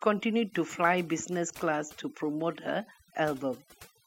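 Overdone noise removal runs through the whole speech clip: an overly aggressive noise reducer has pulled individual frequency bands down whenever they sat near its noise estimate. The background drops and breaks up into twinkling specks. A spectrogram would show scattered isolated blips between the speech and ragged, holed harmonics.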